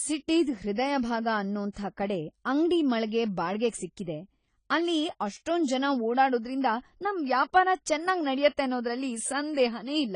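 From start to end, the speech sounds dull and smeared. Nothing is present above 10 kHz. Sustained sounds and sibilants have a warbling, fizzy texture, and the damage is plainly audible. The likely cause is AAC compression. The codec quantises each block of frequency lines against a hearing model. At this rate it drops the top band and thins what remains. The depth of the damage fits a low bitrate, around 24 kbps.

From 1.72 to 1.76 s there is pre-echo. A short hiss arrives about 39 ms before a sharp attack, and the attack itself sounds softened. The codec spread its quantisation noise across the whole block. The noise was sized for the loud onset, so it also filled the quiet gap in front of it. That is why the hiss leads the attack.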